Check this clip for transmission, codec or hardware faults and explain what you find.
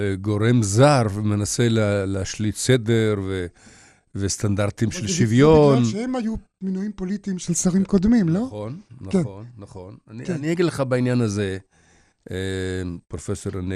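There's MP2 compression damage throughout the speech: it sounds dull and gurgly, with a grainy edge. That's likely Layer II running short of bits, around 80 kbps, so upper sub-bands keep dropping out.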